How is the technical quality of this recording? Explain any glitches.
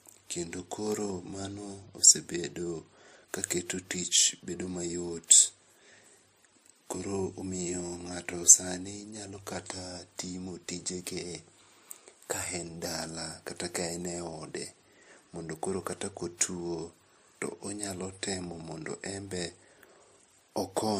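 Throughout, the speech has a smeared, swirly coding haze and nothing above 15.2 kHz. This is likely transcoding between lossy codecs: a low-rate MP3 pass, around 41 kbit/s, re-encoded as WMA, stacking both sets of artefacts.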